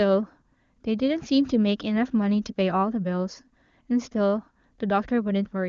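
No technical faults can be heard in this speech.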